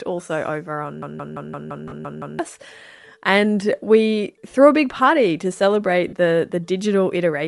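Throughout, the speech has a grainy, breathy edge where the upper spectrum has been thinned and filled with noise, most likely Bluetooth LC3 compression at a modest rate, which fits a bitrate near 48 kbps with 10 ms frames. Unlike a bandwidth cut, the top still hisses.

From 1.02 to 2.39 s, just after "also over", a system hang loop repeats one 0.17 s slice eight times at about 5.9 Hz, which fits an 8192-sample ring buffer. The result is a mechanical stutter rather than a buzz, and roughly a second and a half of audio never arrives. The repeats are exact copies, with no fading or smearing.

Lost LE Audio frames also occur during that loop, at 1.88 to 1.92 s, a 40 ms gap that fits four lost frames. A second loss comes at 6.08 to 6.13 s, after "a big party to", lasting 50 ms, which fits five frames. Each gap is a brief noisy smear that does not repeat, which is what separates it from the loop.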